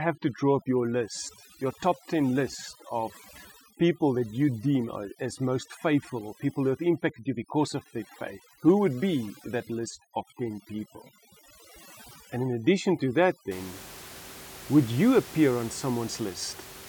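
From the start to about 13.5 s the speech carries overdone noise removal: a noise reducer set far too aggressively pulls individual frequency bands down or out whenever they sit close to its noise estimate, taking the quieter parts of the voice with them. The pauses fall to near silence speckled with twinkling artefacts. Unlike a simple noise gate, which mutes everything at once, this flickers band by band. The room noise, about 17 dB below the speech, is what the processing was chasing.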